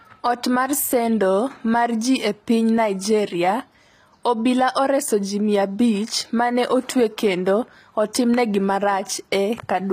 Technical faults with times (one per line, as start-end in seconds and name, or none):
0.00-9.92 HE-AAC compression